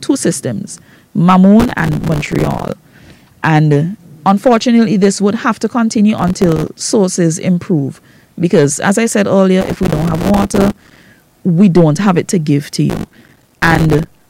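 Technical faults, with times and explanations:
1.60–2.72 s, 6.18–6.68 s, 9.61–11.05 s and 12.90–14.20 s: processor overload crackle. In each burst the audio is riddled with tiny hard-edged silent gaps, pointing to buffers of roughly 3 ms missing their deadlines one after another, often well over a hundred per burst. The rapid dropouts merge into gritty tearing that stops when each burst ends.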